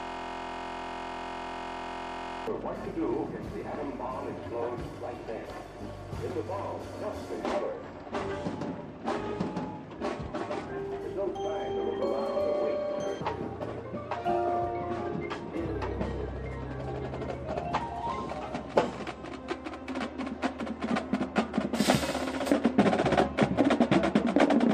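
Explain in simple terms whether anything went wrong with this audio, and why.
Right from the start until about 2.47 s there's a system hang loop. The computer stalled while the sound hardware kept replaying one tiny 23 ms slice, over a hundred times, which fits a 1024-sample buffer. That's why you hear a steady buzz, about 43 times a second.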